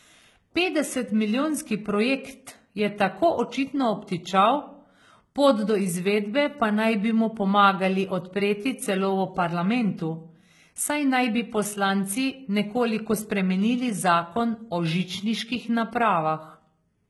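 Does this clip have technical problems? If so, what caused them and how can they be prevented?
Yes. HE-AAC compression damages the speech throughout: the treble stays bright but sounds gritty and metallic, and s sounds turn lispy, likely because the upper band is rebuilt from copied lower bands rather than coded. This fits a very low bitrate around 16 kbps. To prevent it, encode at a higher bitrate or use plain AAC, so the high frequencies are coded directly.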